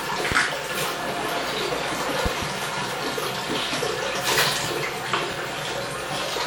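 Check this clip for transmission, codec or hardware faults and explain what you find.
Two loud pops are present. At 0.32 to 0.34 s a single sharp pop jumps about 20 dB above the sound. From 2.26 to 2.45 s a quick double pop rises about 15 dB. The sound continues underneath both. The cause is likely a voltage pulse from a plug, switch, static or driver glitch, added to the signal.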